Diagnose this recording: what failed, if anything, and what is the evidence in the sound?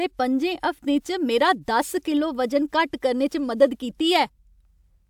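Nothing failed; no fault is audible in this speech.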